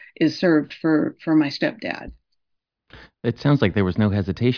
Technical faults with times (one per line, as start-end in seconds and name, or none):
none